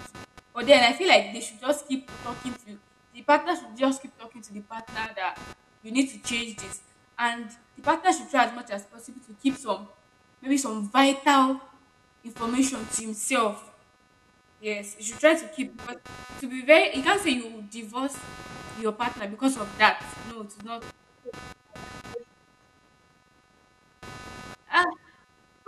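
Throughout the recording, current drawn by the computer's processor, graphics hardware or mouse disturbs the ground that the audio circuit shares with them, so the computer's workload leaks into the signal as computer activity noise. It sounds like a buzzing, chirping texture pulsing around 300 Hz, sitting roughly 25 dB under the speech. It rises and falls with what the machine is doing rather than with the talking, and it continues through pauses.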